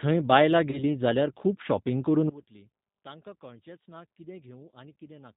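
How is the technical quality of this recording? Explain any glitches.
The recording has clear technical problems: a rough, band-limited codec sound throughout, one brief dropout, and a large level collapse in the second half.

Throughout, the speech sounds slightly rough and synthetic, with nothing above 4 kHz. This is the G.729 codec (G.729A at 8 kbit/s), which rebuilds speech from a few coded parameters per frame.

From 0.71 to 0.84 s, just before "जाल्यार खूब शॉपिंग करून", the sound is briefly stretched into a buzzy tone or coloured noise that fades. This is VoIP packet loss concealed by the speech codec. What sounds like a single 20 ms packet was lost, and the decoder extrapolated and took time to recover.

From 2.29 s to the end, after "जाल्यार खूब शॉपिंग करून", the speech drops by about 22 dB and becomes a faint remnant. The likely cause is one channel inverted, so the shared centre content cancels when summed to mono.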